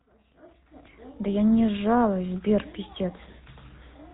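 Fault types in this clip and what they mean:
GSM full-rate codec: a mobile-phone coder rebuilds the speech from a vocal-tract model driven by sparse, regularly spaced pulses, leaving a plainly audible gravelly buzz throughout and nothing above 3.8 kHz. Plain telephone band-limiting would only dull the top; this roughness sits inside the voice.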